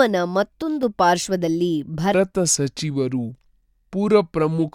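Speech with two faults. At 0.62 s, speech and background drop together by about 6 dB, recovering at 0.83 s: a sudden gain jump, likely from an unramped gain change. From 2.14 s to the end, a section at the wrong speed runs at 0.777 times, deep and slow, roughly four semitones low. A clock mismatch is the likely cause.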